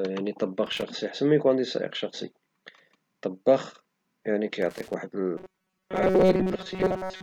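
Loose connector crackle appears from 0.66 to 0.83 s and again from 4.62 to 4.94 s: irregular scratchy bursts as a dirty contact intermittently breaks the signal. From 5.37 s to the end, the speech becomes a rigid metallic buzz at 188 Hz, robotic sound likely from repeating short buffers of roughly 5 ms, with most of the real audio skipped.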